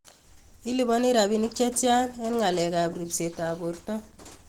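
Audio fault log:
throughout Opus compression: the encoder was likely starved of bits. The sound fits a rate near 16 kbps in Opus's hybrid speech mode, with sparse bands refilled by folding and noise, so the speech turns plainly hoarse, rough and grainy while still reaching 20.1 kHz.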